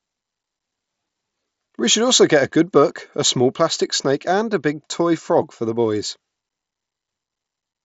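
No technical faults are audible in this speech.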